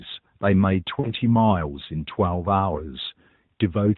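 A speech recording carried over the AMR narrowband mobile codec, band-limited with nothing above 4 kHz, has a brief smeared, warbling dip from about 1.00 to 1.14 s, where the sound thins and returns slightly rough. These are lost AMR speech frames: a gap that fits two missing 20 ms frames, which the decoder filled by repeating the last good pitch and vocal-tract settings at falling gain. The result is a short stretched, fading patch rather than a clean silence.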